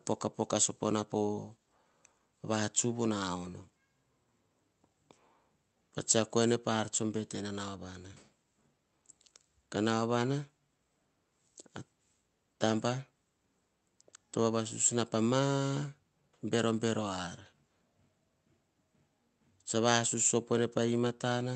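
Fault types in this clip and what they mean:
No faults are present.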